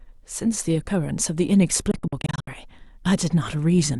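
From 1.91 to 2.48 s the speech breaks into short silences totalling about 280 ms, the longest near 70 ms. This Bluetooth dropout likely comes from packets arriving too late at the headphones. Unlike a playback stall, the sound resumes further on, skipping the lost audio.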